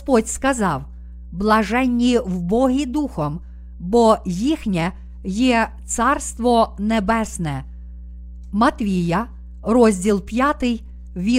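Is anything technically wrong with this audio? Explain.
Yes, mains hum at 60 Hz runs through the whole speech clip, roughly 20 dB below it. A ground loop or a nearby transformer is leaking the power line into the signal as a steady pitched low tone with harmonics, unlike the unpitched, shifting murmur of rumble.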